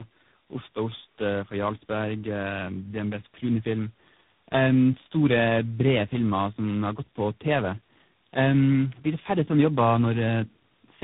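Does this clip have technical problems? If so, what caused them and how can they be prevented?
Yes: tandem speech coding runs through the whole clip, with nothing above about 3.8 kHz. The speech sounds rough, muffled and warbly, which fits three speech codecs in a row, likely AMR-NB and G.726 among them, each re-encoding the previous one's damage. To prevent it, keep one codec end to end with transcoder-free operation, or pass the coded stream through untouched at network borders.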